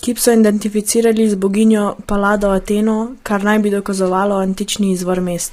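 From start to finish the speech sounds rough and grainy, with a hiss filling the gaps between harmonics and a thin, artificial-sounding top band. This is likely low-delay AAC compression at a bitrate that fits about 24 kbps, where too few bits are left to code the harmonics cleanly.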